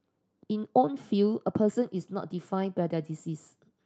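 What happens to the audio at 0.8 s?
At 0.8 s the speech sits inside a stretch of repeated timing corrections running from 0.03 to 3.70 s. The receiver keeps trimming short pieces to hold 105% speed. This is heard, if at all, as small hiccups. Behind it is clock drift between sender and receiver. The sender's clock runs about five percent fast, so the jitter buffer keeps overfilling and must shed audio.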